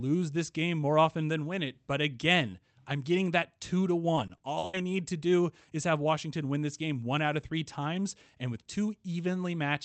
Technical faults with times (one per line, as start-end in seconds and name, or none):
4.15-4.75 repeated packet loss (robotic sound)